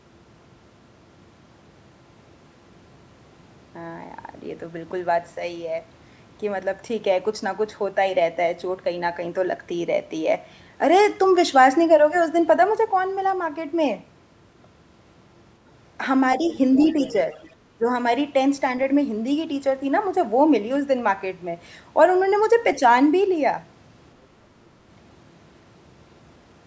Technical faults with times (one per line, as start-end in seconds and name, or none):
16.45-17.53 other side's voice leaking through
17.78-17.89 speech suppressed in double talk